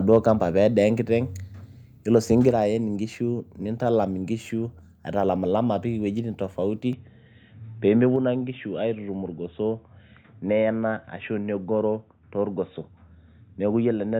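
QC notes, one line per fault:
0.13–0.31 s, microphone overload: the opening peaks push about 1 dB past the converter's ceiling, and a small fraction of samples, well under one percent, have their tops flattened. That squared-off waveform adds a brief harsh, crackly edge to the loudest moment at the very start. The likely cause is an input volume set too high, so the strongest peaks reached the converter's limit before anything downstream could control them.
2.49 s and 8.16 s, microphone volume stepped down: at each of these two points the level drops abruptly by about 3 dB, with voice and background falling together rather than fading. A single clean step like this, repeated, sounds like gain control on the capture side, likely call software judging the microphone too hot and lowering the device's input volume one notch at a time. The drop at 2.49 s follows the distorted opening peaks.
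6.93 s to the end, input switched to a poorer device: from here the sound turns duller and boxier. There is no gap at the change and no noticeable jump in level. A new, faint noise floor sits roughly 50 dB under the signal. A sudden, lasting loss of top end like this is likely the recording moving mid-stream to a narrower-band microphone or a headset's call profile, which carries its own tone and background.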